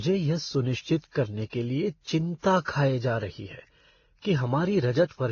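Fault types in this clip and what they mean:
transcoding between lossy codecs: the speech stops at 6.8 kHz and carries mismatched artefacts heard together, likely from passing through several lossy codecs in turn. One low-bitrate encode would give a single consistent artefact character, not stacked ones.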